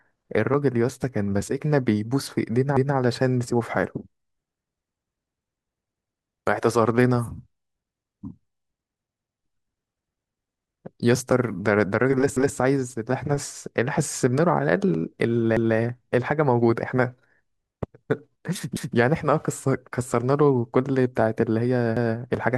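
A short stutter breaks the speech seven times, at 2.77, 5.97, 9.17, 12.37, 15.57, 18.77 and 21.97 s. Each time, about 200 ms of sound plays twice in a row. This is overlapping chunks: the audio was handled in 3-second pieces, and each new piece began 200 ms before the previous one ended. That overlap gets replayed at every seam, producing a steady hiccup every 3.2 s.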